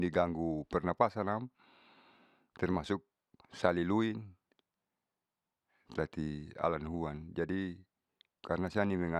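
Resampler restarted on every block, from 1.54 s to 5.76 s: the rate converter, apparently going from 44.1 kHz to 48 kHz, was run on each 20 ms block in isolation, so at every block edge it lacked the true neighbouring samples and left a small error there. With blocks this short, the errors repeat at 50 Hz and fuse into a low buzz riding on the speech, which drops away whenever the speech pauses.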